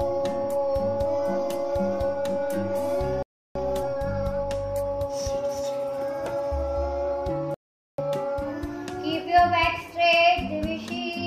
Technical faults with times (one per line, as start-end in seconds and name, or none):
3.23-3.57 Bluetooth stall
7.54-7.99 Bluetooth stall